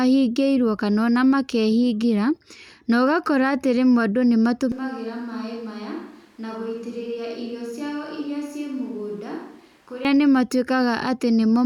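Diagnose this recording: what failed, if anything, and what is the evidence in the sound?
A switch to a distant microphone, likely a close-mic wiring failure: from 4.72 to 10.05 s the speech turns suddenly roomy, thin and about 10 dB quieter.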